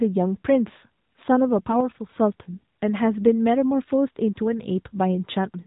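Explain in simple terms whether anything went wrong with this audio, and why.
Throughout the clip the speech sounds thin, muffled and clearly buzzy and synthetic, like a phone call. This is AMR narrowband mobile codec damage: the mobile-phone codec rebuilds the voice from a simplified model and discards everything above about 3.8 kHz.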